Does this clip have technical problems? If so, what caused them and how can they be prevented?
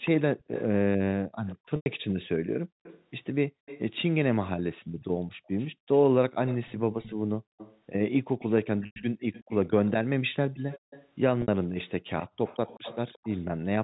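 Yes. Echo leak runs from 0.05 to 1.56 s, 2.83 to 3.99 s, 5.01 to 11.08 s and 12.2 to 13.43 s. A copy of the speech trails it by 178 ms, roughly 10 to 20 dB down. The likely cause is a far-end loudspeaker whose echo canceller let part of the pickup return. Using headphones, or a better-tuned canceller at that end, would prevent it.

Background gated by the echo canceller occurs from 1.56 to 3.66 s, 4.82 to 5.88 s, 7.15 to 7.58 s and 10.79 to 10.9 s. The room sound drops by up to about 40 dB, for around half a second or less each time, as the canceller clamps the microphone during loudspeaker playback. Gentler suppression settings, or headphones, would avoid it.

Packet loss with pitch repetition occurs at 1.76 s and 8.86 s, each lasting 100 ms, and at 11.42 s for 60 ms. The receiver repeats the last pitch cycle, giving a held, buzzy tone that fades before the speech resumes. The lengths fit runs of 20 ms packets. 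A steadier network connection, or forward error correction, would reduce it.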